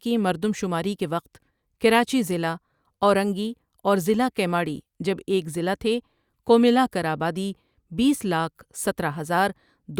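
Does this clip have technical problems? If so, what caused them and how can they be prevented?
No, no technical faults here.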